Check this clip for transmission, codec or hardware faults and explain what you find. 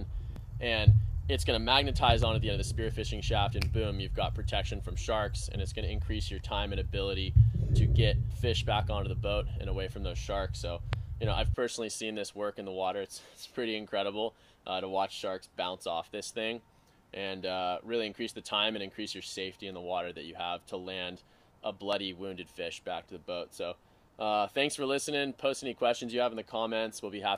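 Three loud pops occur. The first, at 2.10 to 2.25 s, is a double pop about 10 dB above the sound. Single pops follow at 10.93 to 10.95 s, about 15 dB up, and 21.93 to 21.95 s, about 10 dB up. A likely voltage pulse from a switch, plug or static was added to the signal. The sound continues underneath each sharp thump.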